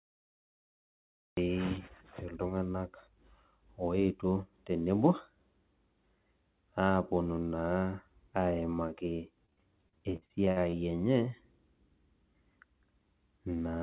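The clip is speech with two faults. It opens with a cut-off start: digital silence runs from 0 to 1.37 s, and then the audio begins abruptly in the middle of a sound, with no attack or fade-in. That hard entry is what separates a recording or stream that began late from a quiet lead-in or a gentle fade. From 9.46 to 10.74 s there is repeated packet loss, heard as robotic sound. About a dozen short holes follow one another, the longest around 54 ms, and each is filled by stretching the previous sound, so roughly a quarter of that stretch is concealment rather than real audio. Because the gaps are patched with smeared repeats instead of being left silent, this differs from simple dropouts. The call path leaves nothing above 4 kHz, which fits G.711 mu-law telephone coding.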